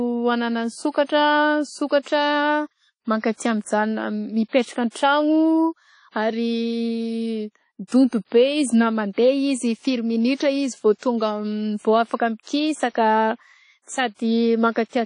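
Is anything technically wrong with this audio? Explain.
Yes. WMA compression runs throughout the speech. A low-bitrate transform codec, likely at about 32 kbps, smears quantisation noise over long blocks and drops weak components. The result is a ringing, washy sound, hiss that swells with the signal, and nothing above 10.1 kHz.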